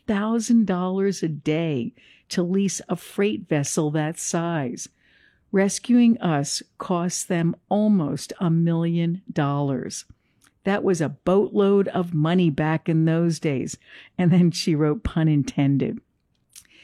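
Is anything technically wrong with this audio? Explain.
No, nothing is technically wrong.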